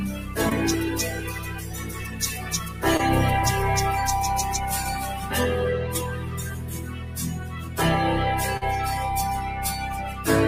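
A noise suppressor applied to music or sounds runs throughout, treating steady tones and tails as noise, so the level pumps by roughly 10 dB. Sound cut by the noise suppressor appears at 0.18–0.37 s (about 5 dB down) and at 1.19–2.21 s, 2.37–2.82 s and 6.09–7.78 s (about 6 dB each), where sustained material sinks and decays shorten. Short concealed packet loss occurs at 0.49–0.53 s and 2.97–3.01 s (20 ms missing each) and at 8.57–8.63 s (40 ms), where the receiver continued the preceding sound before blending back, leaving brief smears or wobbles.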